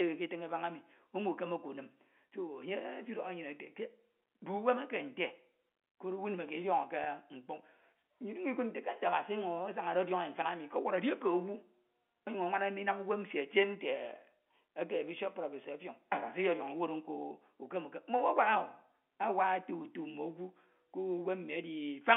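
A speech clip carried over G.711 telephone coding, with packet loss with pitch repetition at 7.04 to 7.06 s, just after "koro owu ndime kied". About 20 ms went missing, consistent with one lost packet, and the receiver looped the last pitch period, giving a brief held buzz rather than the silent gap of a plain dropout.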